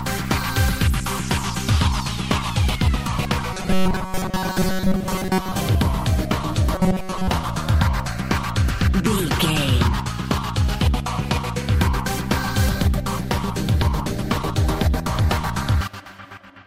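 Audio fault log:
3.53 to 5.54 s and 6.76 to 7.28 s: robotic sound from repeated short buffers. The sound turns into a rigid, metallic buzz fixed at 188 Hz. This is likely a roughly 5.3 ms slice being replayed over and over while most of the real audio is skipped.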